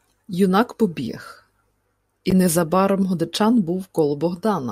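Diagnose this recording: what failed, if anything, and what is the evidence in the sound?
The codec stage failed: a corrupt frame was decoded, with flipped bits in the compressed stream played out instead of being concealed. In this speech clip, from 2.31 to 2.33 s, a brief burst cuts into the signal, peaking at about -10 dBFS. It spans a couple of frames. The decoder misread gains and spectral codes, placing energy at frequencies the original never had, so the damage lasts about as long as the bad frames.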